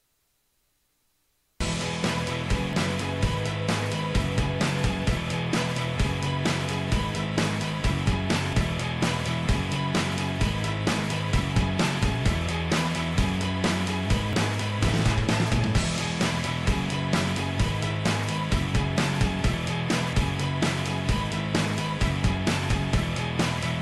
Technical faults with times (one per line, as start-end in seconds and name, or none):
2.73 audio missing between chunks
8.53 audio missing between chunks
14.33 audio missing between chunks
20.13 audio missing between chunks